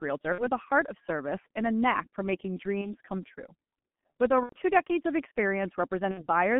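From start to finish the speech passes through a G.723.1 codec, limited to roughly 150 Hz to 3.4 kHz. The damage is heavy, consistent with a 6.3 kbit/s stream. Its 30 ms frames and slowly updated voice model leave the speech muffled and hoarse, with smeared consonants.

VoIP packet loss concealed by the speech codec occurs at 0.32–0.45 s, 2.81–2.95 s, 4.43–4.56 s and 6.11–6.26 s. The gaps point to about 60, 30, 90 and 60 ms of missing audio. The decoder extends its last pitch and filter with decaying gain, producing a fading buzzy tone or coloured noise, then weak, distorted speech as it recovers.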